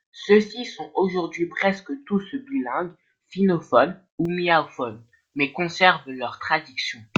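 Pre-emphasis left on from 4.25 s to the end at 7.18 s: the treble lift applied for transmission was never undone by the matching de-emphasis, so the speech sits about 11 dB hotter at 10 kHz than at 1 kHz, turning thin, glassy and harshly sibilant.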